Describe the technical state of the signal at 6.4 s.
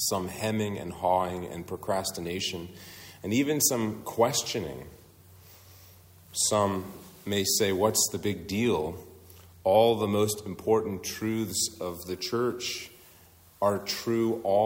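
At 6.4 s the signal is intact, with no audible fault at that moment.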